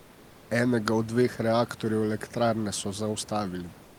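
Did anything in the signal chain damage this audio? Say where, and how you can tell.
Yes, at the codec stage. There is comfort noise in place of the background at two points. From 0.00 to 0.49 s, before speech starts, the real room noise is replaced by a smooth, featureless hiss about 2 dB quieter. From 3.83 s to the end, for 156 ms, the same thing happens, about 4 dB quieter. The likely cause is Opus discontinuous transmission. The sender goes quiet in pauses, and the receiver synthesizes shaped noise. Elsewhere the genuine room noise sits about 24 dB below the speech.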